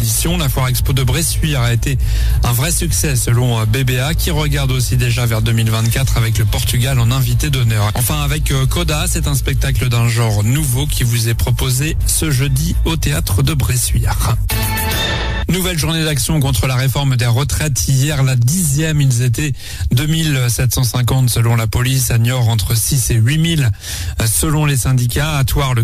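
No technical faults are audible.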